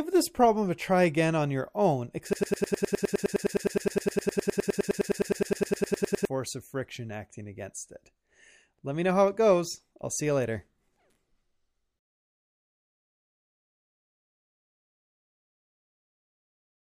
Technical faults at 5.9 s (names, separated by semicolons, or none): broken-record loop